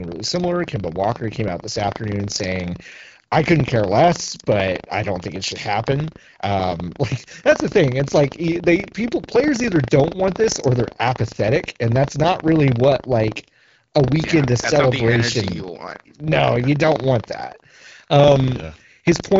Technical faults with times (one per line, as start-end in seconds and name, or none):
0.00-19.39 buffer tearing